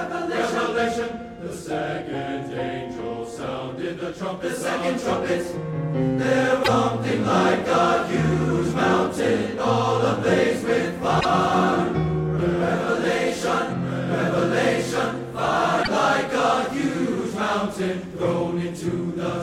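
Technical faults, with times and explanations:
6.60–6.68 s, 11.17–11.25 s and 15.79–15.88 s, damaged data in a compressed stream: three brief glitches, each about 80 ms long, break the sound. Corrupted bytes in the compressed stream leave the decoder misreading frames and losing sync until it locks onto the next valid frame header.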